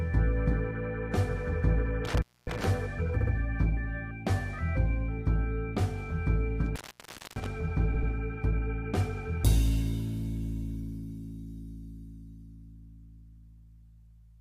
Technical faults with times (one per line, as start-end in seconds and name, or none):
2.05-2.64 intermittent contact
3.20-3.33 repeated frames
6.66-7.46 intermittent contact
7.93-8.11 repeated frames